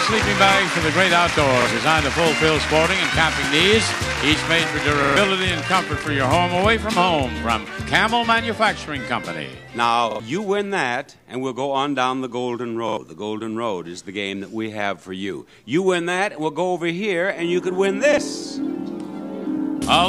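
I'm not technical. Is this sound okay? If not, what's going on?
No. Repeated buffer at 1.62, 5.04, 10.11, 12.89 and 18.13 s: the audio arrived late, so a 43 ms slice replays, causing brief stutters.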